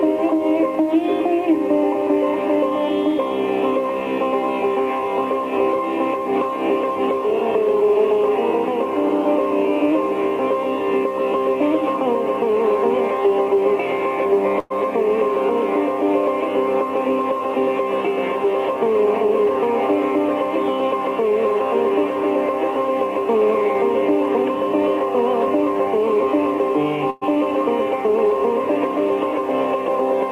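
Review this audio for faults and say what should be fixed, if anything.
At 14.59 to 14.72 s and again at 27.10 to 27.24 s, the sound briefly stalls. For about 0.11 s each time, the last sound is carried on as a short, fading buzz or hiss, then the audio picks up exactly where it stopped. Nothing is lost; the timeline is simply pushed back by roughly 110 ms. This is likely a call audio freeze: packets were held up in transit, the jitter buffer ran empty, and the receiver filled the wait with a continuation of what it last had. Preventing it means finding and fixing the network path delay or congestion, or giving the jitter buffer enough headroom to ride out such stalls.

From 16.98 to 17.81 s, the audio runs about 7% fast while the pitch stays the same, so that stretch sounds hurried. This is a jitter buffer speed-up. Delayed packets arrived together and left the buffer holding more audio than its target. 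To shrink that excess delay, the receiver cut out short pieces one or a few pitch periods long, many times in a row, trimming away something like 70 ms in total. Preventing it comes down to the same fix, steadier packet delivery, so that late bursts don't overfill the buffer and force it to catch up.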